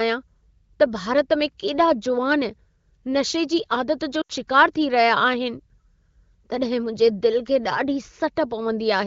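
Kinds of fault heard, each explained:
Lost AMR speech frames: Right after "जी आदत जो", near 4.21 s, about 80 ms of speech drops out, which fits four 20 ms frames the wideband decoder patched over.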